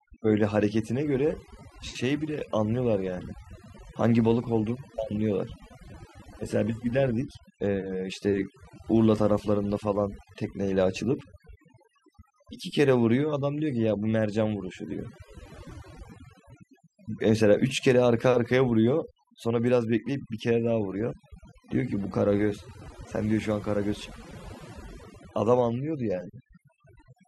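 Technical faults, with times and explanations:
Throughout: overdone noise removal. The noise reduction on this speech was set far too strong, so every frequency band that sits close to the tool's estimate of the noise is pulled almost to nothing. The gaps between phrases drop to near silence scattered with twinkling, chirpy specks where isolated bands flicker on and off, and the quieter parts of the voice are stripped away with the noise.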